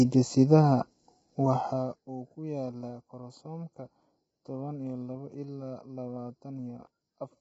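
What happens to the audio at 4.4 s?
At 4.4 s you're hearing the same thing as the rest of the speech: heavy damage that's likely from low-delay AAC compression at a low bitrate, around 16 kbps. Coarse coding at that bitrate adds noise between the harmonics, so the sound is rough and grainy, with nothing above 7.8 kHz.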